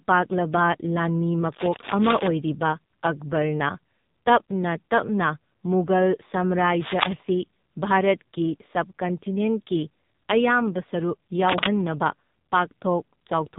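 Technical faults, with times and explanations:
Throughout, AMR narrowband mobile codec: The speech has been carried through a narrowband mobile speech coder at a very low bit rate, which fits AMR-NB's 5.9 kbps mode. The coder rebuilds the voice from a vocal-tract model excited by only a few pulses per subframe, so the speech comes out buzzy and synthetic. Nothing above 3.7 kHz survives the 8 kHz sampling, leaving the voice dull, boxy and heavily processed.
1.52–2.27 s, 6.79–7.13 s and 11.49–11.67 s, cable scratch noise: Three bursts of dense, uneven crackling and rustling sit over the speech. The first two are about as loud as the voice, and the last is a little louder. The likely cause is a worn cable, connector or control being moved, so that its contact resistance jumps about rapidly and injects ragged noise for as long as the movement lasts.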